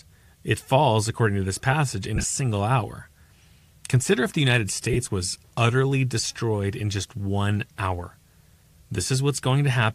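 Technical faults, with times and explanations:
2.16–2.24 s lost LE Audio frames. After "to this passage in" and before "single hour", about 52.5 ms of audio goes missing. The gaps are short and spread over 75 ms. The longest is around 20 ms. The decoder fills each gap by replaying the last spectrum with random signs. The sound smears into a brief, noisy blur.
4.93–4.97 s lost LE Audio frames. Just before "was utterly destroyed in", 30 ms drops out. That length fits a few 7.5 ms frames. The same concealment fills the gap with a short, grainy smear. The faint breathy grain elsewhere is likely the LC3 codec running at 64 kbps.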